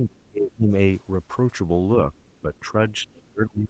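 Right from the start, 0 to 0.74 s, the talker's speech gets pushed way down, a deep dip of around 30 dB over most of that stretch. That's likely speech suppressed in double talk: both ends were talking, and the echo canceller couldn't tell the local voice from loudspeaker echo, so it clamped everything. From 2.17 to 2.6 s you can catch a faint second voice underneath, roughly 40 dB below the talker, likely the other side's voice leaking through because the canceller didn't strip all of the loudspeaker pickup out of the mic. Overlapping that, 2.42 to 2.74 s brings a milder suppression dip, about 10 dB. Then from 2.9 s to the end the talker gets ducked hard again, around 30 dB down, likely in the same double-talk pattern. Inside that, 3.06 to 3.31 s, the far-end voice bleeds through once more, a bit stronger this time at roughly 30 dB under the speech. The whole clip tops out at 8 kHz, consistent with the call's Opus path at around 24 kbps.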